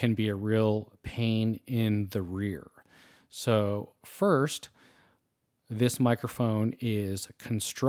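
No technical faults are audible.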